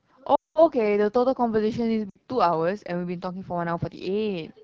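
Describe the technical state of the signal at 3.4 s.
At 3.4 s the speech sounds rough and raspy, as it does throughout: AMR wideband (HD Voice) codec damage, pointing to a low rate near 8.85 kbit/s that models speech coarsely.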